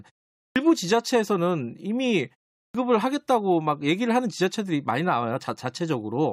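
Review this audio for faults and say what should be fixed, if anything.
Speech bursts in abruptly at 0.42 s and again at 2.59 s, with its opening sounds missing: about 140 ms lost after a 0.4 s pause, then about 155 ms after a 0.32 s pause. This is clipped start after a pause. The output device sleeps during the silence and swallows audio while it wakes and relocks. To fix it, keep the output stream active through silences, or send audio slightly early so it covers the wake-up time.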